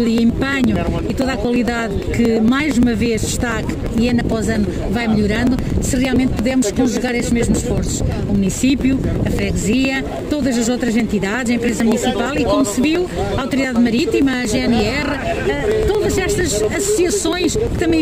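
Periodic USB or driver dropouts run from 0.07 s to 17.9 s, recurring every 0.115 s. Each time, a blocked bus or driver discards roughly 10 ms of audio, which is skipped rather than silenced, giving around 150 evenly spaced ticks wherever signal is present.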